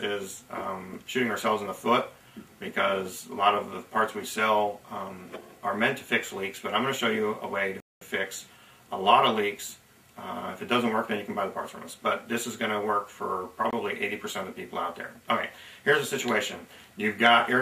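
A likely Bluetooth stall, where interference held up packets on the wireless link so the receiving buffer emptied and playback waited for resent data, shows up twice. At 7.80 s the sound cuts out to silence for about 212 ms before resuming at 8.02 s. A second, much shorter dropout at 13.71 s silences the audio for about 23 ms, a brief gap before the sound carries on.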